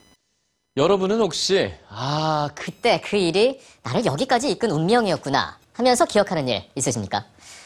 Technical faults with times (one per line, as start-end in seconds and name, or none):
0.00-7.66 computer activity noise
2.67-7.66 section at the wrong speed